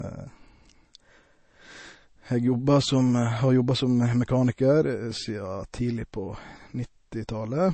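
Low-bitrate audio saved at a high bitrate runs through the whole speech clip, from start to finish. Nothing is present above about 8.3 kHz, and the smeared, swirly coding artefacts of a heavily squeezed MP3 remain audible, which fits a first pass at around 32 kbit/s. The file was likely re-encoded afterwards at a much higher rate such as 192 kbit/s, which adds size but cannot bring back the removed treble or clean up the earlier damage.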